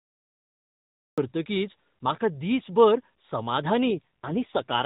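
The capture began late, a cut-off start: nothing was recorded for the first 1.18 s, so the clip opens on digital silence and the speech then appears abruptly at 1.18 s, already mid-sound. There is no natural onset or fade-in, so the first audible syllable arrives at full level with its beginning missing, as if the signal had been switched on partway through an utterance.

From 3.86 s to the end of the clip comes an AMR rate drop. The radio link weakened, so the network ordered the AMR narrowband mobile codec down to a lower mode, spending fewer bits on the speech model and more on protecting the frames against errors. The change in quality fits a fall from the 12.2 kbps mode to the 5.9 kbps mode. Because the codec stays narrowband throughout, with nothing above 4 kHz, the bandwidth does not change and there is no dropout. Instead the voice becomes coarser, buzzier and more synthetic, losing the relative smoothness it had before 3.86 s.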